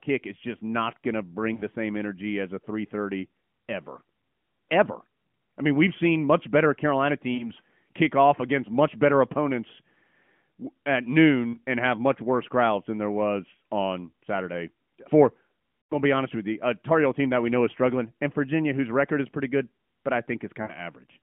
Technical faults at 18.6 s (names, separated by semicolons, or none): none